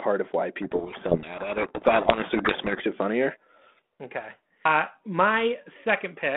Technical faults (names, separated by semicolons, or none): codec payload misread